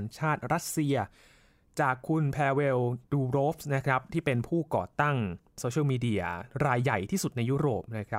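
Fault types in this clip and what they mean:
Nothing in the recording points to a technical fault. The speech gives no sign of any audible problem to list.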